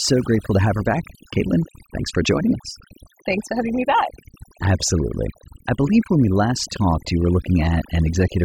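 Overdone noise removal runs through the whole clip: a noise reduction stage set far too strong keeps pushing individual frequency bands down or out whenever they sit near its noise estimate, taking quieter parts of the speech along. The background drops and breaks up into twinkling specks.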